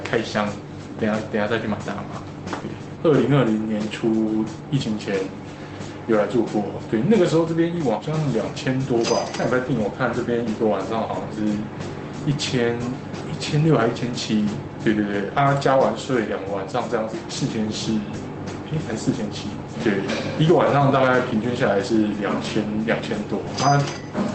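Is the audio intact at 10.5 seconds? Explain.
Yes, the audio at 10.5 seconds is intact, with no dropout, glitch or other fault at that moment beyond the ordinary character of the call path it travelled through.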